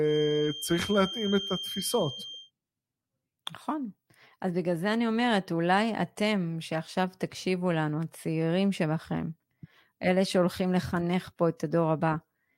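From 0.0 to 2.52 s, a thin feedback whistle at 3.2 kHz sits roughly 10 dB under the speech, likely a loudspeaker-to-microphone loop held just short of runaway.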